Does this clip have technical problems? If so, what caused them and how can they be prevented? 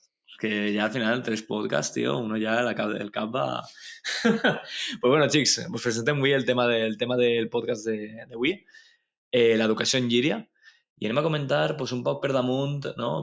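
Yes. A noise suppressor was applied to music or sounds for the whole clip. A suppressor built for speech treats sustained tones and ambience as noise, so level swings by roughly 5 dB as it clamps down on held material and releases on attacks. The result is a pumping quality. On a waveform the envelope breathes unevenly. On a spectrogram, sustained bands fade and return, while the band limit at 8 kHz comes from the call's normal microphone processing. Switching the suppressor off, or using a music mode, prevents this.

The suppressor also cut sound more deeply at two points: from 8.07 to 9.04 s, with a drop of about 20 dB over roughly 0.7 s, and from 10.43 to 10.78 s, with a drop of about 21 dB over roughly 0.2 s. In both spots it misjudged steady or decaying material as noise and gated it hard, so the sound sinks abruptly. The waveform shows sudden hollows in amplitude, and the spectrogram shows darkened gaps where energy should continue. 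Disabling noise suppression for non-speech audio prevents these dropouts.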